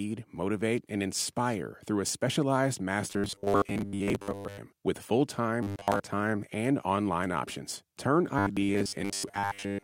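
A rigid, metallic buzz at a fixed 100 Hz runs through the speech from 3.08 to 4.59 s, after "inspire through a specialized", again from 5.63 to 6.00 s, between "with full" and "time and online options", and from 8.39 to 9.84 s. It follows the original only roughly. This is robotic sound from repeated short buffers, likely from audio arriving too seldom, so a 10 ms slice is looped in place of most of the real signal.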